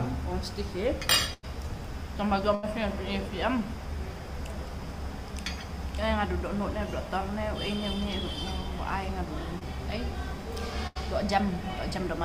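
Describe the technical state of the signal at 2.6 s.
A burst of packet loss runs from 2.55 to 2.65 s. Consecutive packets failed to arrive in time, so the receiver stretched the last sound across roughly 79 ms while fading it down, then resumed with about 80 ms of the audio skipped.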